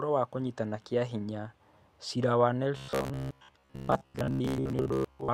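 From about 2.77 s to the end at 5.33 s the speech goes robotic, from repeated short buffers: a rigid, metallic buzz near 66.7 Hz that still roughly follows the speech. Most of that stretch is likely the last 15 ms being looped while fresh audio is skipped.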